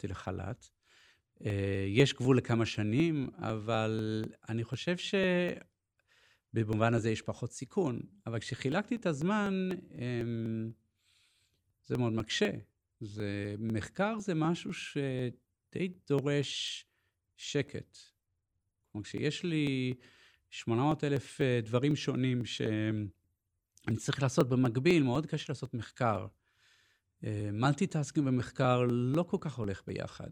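A speech recording marred by periodic USB or driver dropouts: from 0.26 s to 30.14 s, roughly every 0.25 s, about a millisecond of audio is skipped, giving around a hundred ticks. Unlike random crackle, they are evenly spaced and audible only while signal is present.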